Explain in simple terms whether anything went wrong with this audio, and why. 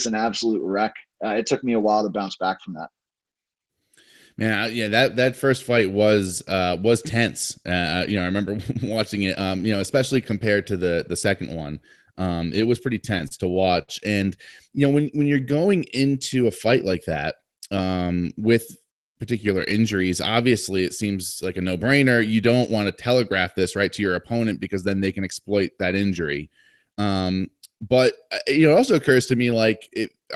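Right after "it was pretty", from 13.01 to 13.90 s, the speech catches and stutters six times, the longest hitch under a tenth of a second. These are repeated stalls (stutter): the call's audio arrived late, its waiting buffer ran dry, and the receiver stretched the last sound until more came. Nothing is actually lost.

Just after "you know when", between 15.16 and 15.63 s and leading into "into a fight like", the speech drags at about 88% of normal speed without dropping in pitch. This is a jitter buffer slow-down: running short on stored audio, the receiver repeated tiny slices of the voice, adding about 63 ms to rebuild its reserve.

Right after "a fight like that", from 17.70 to 18.17 s, the speech briefly rushes at about 113% speed, still at the same pitch. This is a jitter buffer speed-up: a backlog of audio had built up, so the receiver trimmed about 70 ms of tiny slices to catch up.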